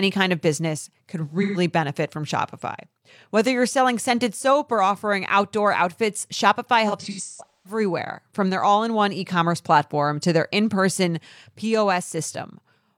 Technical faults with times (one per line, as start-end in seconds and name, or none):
1.42-1.58 AAC frame loss with concealment
6.88-7.80 AAC frame loss with concealment